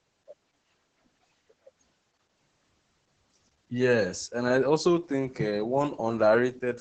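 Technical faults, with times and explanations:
Throughout, Opus voice compression: the speech sounds muffled, hoarse and slightly robotic, with nothing above 8.8 kHz. That fits the SILK wideband mode at roughly 10 kbps. Unlike a plain low-pass filter, coarse excitation coding roughens the voice itself, not only its brightness.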